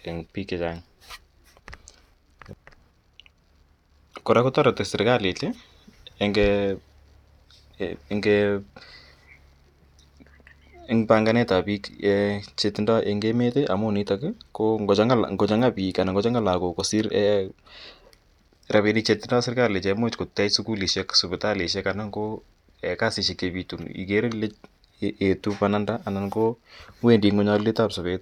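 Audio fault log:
No fault is heard in this speech clip.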